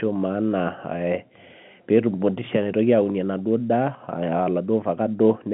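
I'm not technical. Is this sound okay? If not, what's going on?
Yes, this sound is okay.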